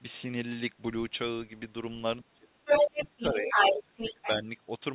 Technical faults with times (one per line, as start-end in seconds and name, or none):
2.22-4.47 speech suppressed in double talk
2.65-4.27 other side's voice leaking through